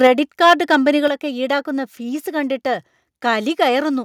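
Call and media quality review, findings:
Microphone overload, 0.03 to 0.07 s. Harsh crackle on the loudest syllables. Peaks about 2 dB past the converter limit, with a large share of samples flattened. Likely cause: mic input gain set too high, so the converter cuts off waveform tops. Again 0.43 to 0.76 s, peaks about 5 dB over, though fewer samples flattened. Rough, gritty edge on the loudest syllables.

Microphone volume stepped down at 0.07 s. Voice and background drop about 3 dB at once, right after the first distorted peak. Likely cause: call software reacting to clipping by cutting device input volume in one step. Second step at 1.08 s, about 5 dB down, following the longer overload. Abrupt level loss, no fade.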